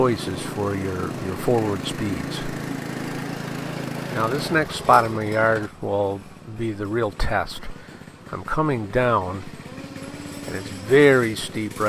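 No technical fault can be heard anywhere in the recording. Close listening turns up nothing that points to a problem in how the audio was captured or carried.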